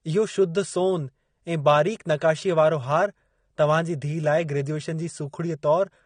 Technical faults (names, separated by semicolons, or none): AAC compression